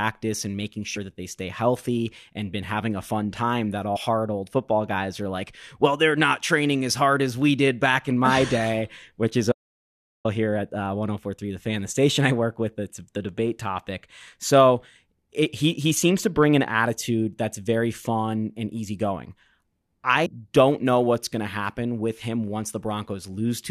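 A short glitch breaks in at 0.95 to 0.97 s, between "and making" and "that they stay healthy". The same kind of blip returns at 3.95 to 3.97 s and again at 20.25 s, just before "don't know what's going". Each one is damaged data in a compressed stream. Corrupted bytes made the decoder misread a frame, lose sync and hunt for the next valid header, leaving a glitch of about 20 ms or less.

From 9.52 to 10.25 s the speech cuts out completely. It stops after "day which is" and resumes at "here at uh", and the gap holds dead digital silence with no room tone at all. This is an audio dropout to silence lasting about 0.73 s. The input was likely lost, through a disconnected device, failed link or stray mute, while the recorder kept writing silence, so whatever was said in that stretch is gone.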